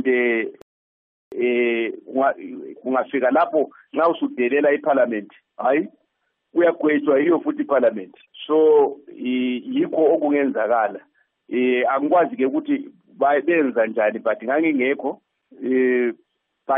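At 0.62 s a rebuffering stall cuts the sound to silence until 1.32 s. The player ran short of downloaded audio, paused about 0.7 s, then resumed exactly where it stopped.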